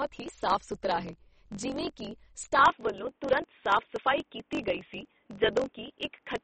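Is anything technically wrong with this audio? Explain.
Yes, three faults are audible in this speech.

Throughout, a 45.9 Hz buzz sits under the speech, which runs 1.07 times fast at normal pitch: a block size mismatch (truncated), consistent with 1024-sample blocks being cut short each pass.

Throughout, the sound is watery and swirly, with nothing above 8.3 kHz. This is likely MP3 compression starved of bits, consistent with a low bitrate around 32 kbps.

From 2.63 s, right after "ਸੁਥਰਾ ਹੈ ਜਿਵੇਂ ਕਿ", to the end, the speech abruptly turns boxy, with no gap, no level jump and only faint new noise. The input was likely switched to a poorer device.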